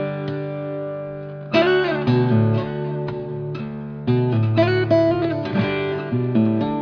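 Nothing in the signal is technically wrong: there are no dropouts, level jumps, or other playback or transmission faults to point to anywhere in the audio.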